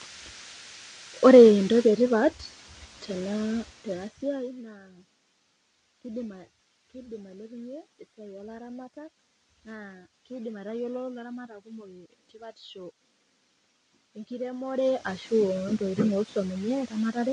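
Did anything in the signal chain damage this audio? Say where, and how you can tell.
Yes. The damage sits at the codec stage and runs through the whole speech clip. Nothing reaches above about 9.8 kHz, so sibilants lose their top and sound dull, and the codec damage is plainly audible as a smeared, fizzy texture on sustained sounds. This is likely AAC compression, with AAC-LC at a bitrate that fits about 32 kbps. At that rate the encoder lowers its cut-off and quantises the remaining spectral lines so coarsely that bands warble and smear.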